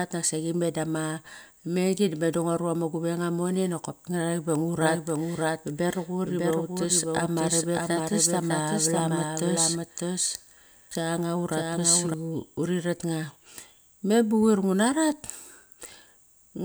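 A speech recording in which a second, slower capture path was likely mixed in, creating a doubled audio track from 4.82 to 12.14 s: an undecayed copy trails about 0.7 s behind, roughly 5 dB quieter, starting and stopping abruptly.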